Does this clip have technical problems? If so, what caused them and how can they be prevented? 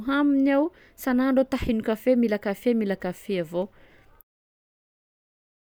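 No, nothing here points to a technical problem, and the speech just eases out in a smooth fade that begins at roughly 4 s and finishes at 4.24 s, so there's nothing to fix or prevent.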